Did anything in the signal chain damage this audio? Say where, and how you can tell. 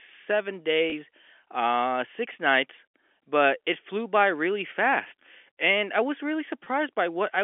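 Yes, at the network stage. A brief held, buzzy moment sounds at 0.90–0.92 s, just before "uh six nights but", and at 6.64–6.66 s, after "I was really". This is packet loss with pitch repetition: each 20 ms gap, fitting one lost packet, was filled by repeating the last pitch period.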